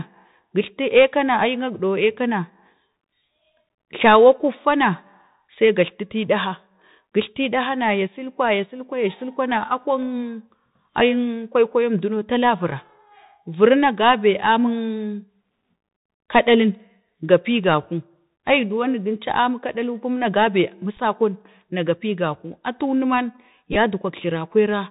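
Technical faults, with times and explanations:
Throughout: Bluetooth CVSD headset codec. The speech sounds narrow and muffled, with a grainy hiss beneath it and scratchy s sounds. The band stops at 4 kHz, and loud high sounds outrun the one-bit adaptive step, which fits a 64 kbps CVSD link.
23.73–23.76 s: Bluetooth headset packet repeated. A brief rough, buzzy flutter appears, with short repeated ticks. Several packets' worth of sound were lost and refilled by decoding the previous packet again. The lost audio is spread over about 30 ms, in runs of only a few milliseconds.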